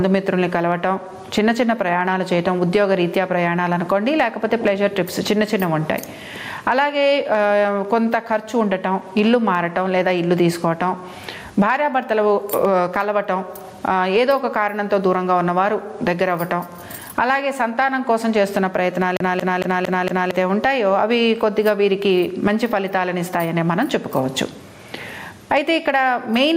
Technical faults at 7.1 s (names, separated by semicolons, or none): gain pumping